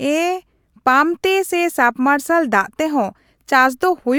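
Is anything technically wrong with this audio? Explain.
Yes. Hard clipping at 0.88 s: one peak in the speech drives a stage about 2 dB past the most it can pass, so the top of that waveform is sliced flat instead of following its natural curve. The squared-off peak adds harmonics high above the original spectrum. Because the overload is small and confined to a single instant, it registers as a brief crackle or tick on that peak rather than sustained fuzz.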